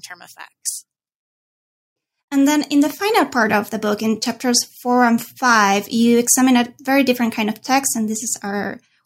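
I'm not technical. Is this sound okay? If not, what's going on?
No. This speech clip has periodic USB or driver dropouts. About four times, every 2 seconds from 1.18 s to 7.20 s (the last one just before "kind of text"), a tiny sliver of sound, far less than a millisecond, is replaced by silence, heard as a tick. A background task briefly stalls the computer's audio connection. Unlike random crackle or a bad cable, these ticks are evenly spaced like a clock.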